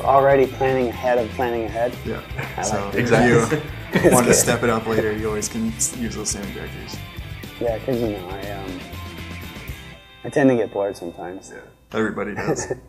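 No technical faults can be heard.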